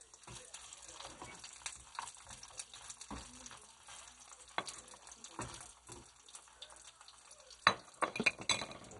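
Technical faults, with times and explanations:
Throughout, MP2 compression: nothing comes through above about 11.2 kHz, so it's dull, with upper bands flickering and a gurgly, grainy edge from coarse quantisation. That's likely heavy MPEG Layer II coding starving its sub-bands, which fits a rate around 56 kbps.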